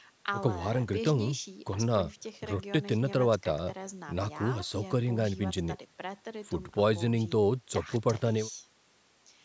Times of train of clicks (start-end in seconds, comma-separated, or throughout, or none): none